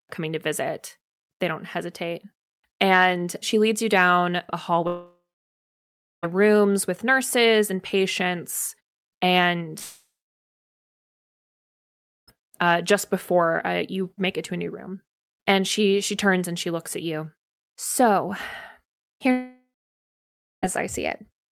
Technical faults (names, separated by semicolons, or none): long network dropout